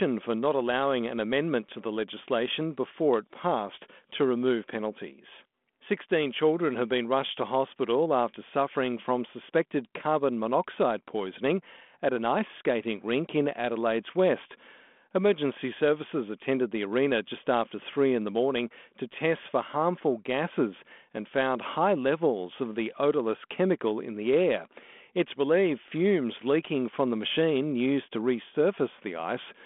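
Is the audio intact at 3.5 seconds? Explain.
Yes, the audio is intact at 3.5 seconds, with the speech passing through the G.726 ADPCM telephone path at 32 kbit/s and nothing above about 3.8 kHz.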